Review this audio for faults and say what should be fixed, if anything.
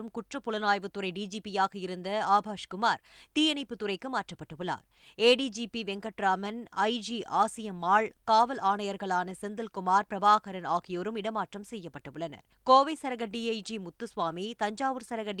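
Nothing here needs fixing, since no faults turn up anywhere in the recording, so there's nothing to prevent either.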